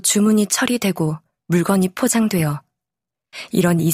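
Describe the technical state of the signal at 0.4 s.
At 0.4 s the speech signal is intact, with no dropout, distortion or other fault.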